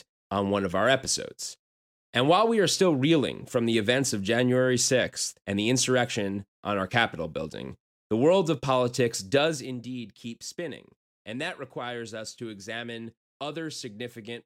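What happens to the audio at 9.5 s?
Zipper noise runs from 9.38 to 9.75 s. The speech level drops by roughly 10 dB in unsmoothed 3 dB steps, about ten per second, and each abrupt step leaves a small click, giving a brief ticking, zipping texture while the level falls.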